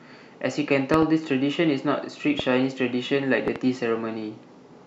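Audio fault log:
0.94–1.04 s: loud pop, a double pop standing well above the speech. A sudden voltage step, likely from a plug, switch, static discharge or driver glitch, enters the signal. Later circuits shape it into a sharp thump.
2.39–2.42 s: loud pop, a single, weaker pop. The speech carries on under it.
3.48–3.58 s: loud pop, another double pop about as strong as the first.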